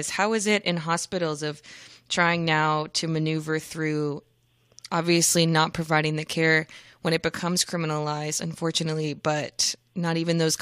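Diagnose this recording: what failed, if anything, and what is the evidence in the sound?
Nothing in the signal chain points to a failure: the speech comes through with no audible interruption, distortion or corruption at any stage.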